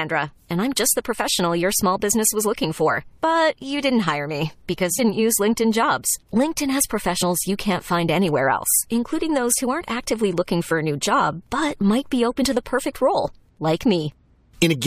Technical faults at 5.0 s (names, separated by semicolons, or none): compressed frames skipped